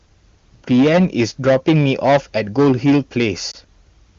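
From the start, hard clipping runs through the whole clip. The speech is driven about 12 dB past what a stage in the chain can pass, so a small but steady share of samples has its peaks sliced flat. Those squared-off tops add high harmonics, heard as a harsh fuzz on every loud syllable. Unlike the rasp of a low-rate codec, the fuzz follows loudness: quiet stretches stay clean while stressed peaks break up.

At 3.51 to 3.57 s there is a brief dip and warble from a lost AMR speech frame. A single 20 ms frame failed its check, and the decoder filled the gap by repeating the previous pitch and vocal-tract settings at reduced gain, then eased back into fresh frames. It sounds like a smeared, slightly wobbly moment, not a click or hard gap, and because it is isolated it never fades to silence. The wideband codec itself, whose clarity fits its top rate, adds at most faint roughness.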